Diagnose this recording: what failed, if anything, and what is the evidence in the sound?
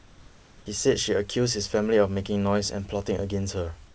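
From 0 to 0.66 s, the background is a steady, featureless hiss about 27 dB below the loudest parts. It is no quieter than what follows, but it lacks that background's detail. This is likely comfort noise in place of the background, inserted by call-path discontinuous transmission.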